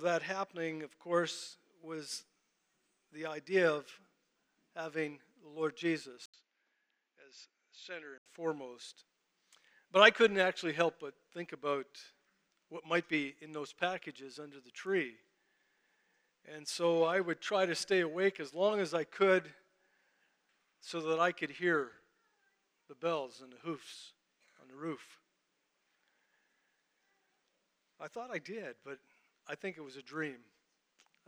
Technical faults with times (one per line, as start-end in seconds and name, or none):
6.26-8.26 input switched to a poorer device